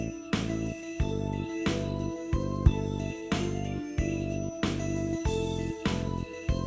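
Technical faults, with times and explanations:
2.66–2.68 s, skip ahead: Playback jumps forward with no gap. Roughly a second of audio was dropped while later audio waited, so both sides join directly.
5.71–6.48 s, jitter buffer speed-up: The audio runs about 12% fast at unchanged pitch. Around a tenth of a second was trimmed in short pitch-period pieces to reduce delay.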